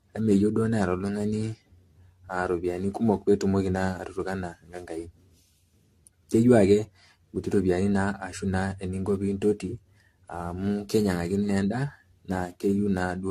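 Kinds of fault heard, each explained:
Generation loss: this speech swirls and sounds hollow, attacks smeared, nothing above 14 kHz, likely from around ten AAC-LC passes at 64 kbit/s.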